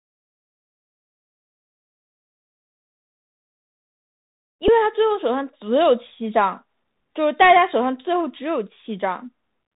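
Across the whole recording the speech sounds narrow and gritty, with a fine granular hiss running underneath. S sounds come out scratchy, and louder bright moments blur into distortion. This is the Bluetooth CVSD headset codec. It encodes audio as a stream of single up-or-down bits with a step size that keeps adapting. Nothing above 4 kHz survives, and when the signal changes faster than the step can follow, it distorts. The damage is plainly audible, and the character fits CVSD's 64 kbps stream.

At 4.68 s a tiny tick interrupts the audio, a brief click rather than any sustained buzz. This is a Bluetooth headset packet repeated. A single voice packet between headset and phone was lost, and the chip filled the gap of about 3.8 ms by decoding the previous packet's bits a second time. Only one packet went missing, so no run of repeats built up into the steady buzz near 267 Hz, and good packets resumed immediately.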